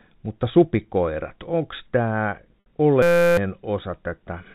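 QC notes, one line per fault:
2.60–2.66 s, packet loss with pitch repetition: right after "mutta supikoirat onko tämä" about 60 ms of audio drops out, a gap that fits three lost packets. The receiver fills it by repeating the last pitch period and fading that copy down over about 50 ms. What remains is a brief held, slightly buzzy tone where the sound should have moved on, followed by the fade and a cross-fade back into live audio.
3.02–3.37 s, system hang loop: the playback path stalls while the sound hardware keeps cycling one 5.8 ms stretch of audio, about 60 times in a row. This fits a 256-sample ring buffer replaying unchanged. Because the loop is so short, it repeats at 172 Hz and is heard as a steady mechanical buzz, not a stutter. Roughly 0.4 s of real audio is lost. The buzz stays inside the narrow telephone band of the G.711 coding.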